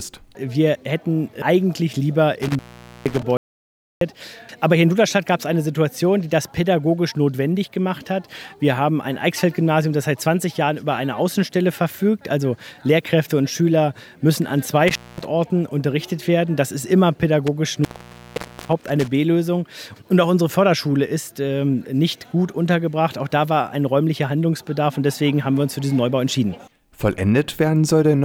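At 2.42 s the first of three intermittent contact faults appears. A loose plug or cable connection opens for about 468 ms before the signal returns by 3.23 s. The break is bracketed by crackle as the contact scrapes open and shut, and a faint hiss stays audible underneath. That residual noise separates it from a clean digital gap. The same fault returns at 14.88 s with a shorter opening of about 227 ms, and again at 17.47 s with the longest one, about 844 ms, before the sound settles by 19.08 s.

Between 3.37 s and 4.01 s there is an audio dropout to silence lasting about 643 ms. The sound stops mid-flow and the gap is silent. There is no hiss and no room tone. That is what marks it as different from the contact fault just before it. The likely cause is that the input was briefly lost while the recorder kept writing silence, and whatever was happening during that stretch is gone.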